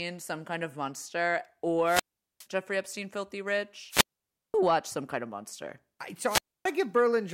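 At 1.85 to 2.47 s, 3.89 to 4.55 s and 6.27 to 6.67 s the speech breaks up in a wireless microphone squelch dropout. The radio link fades, hiss swells briefly, then the receiver's squelch cuts the output for about 0.41, 0.53 and 0.28 s. On a waveform each shows as a flat gap; a spectrogram shows a short band of broadband noise before a blank column.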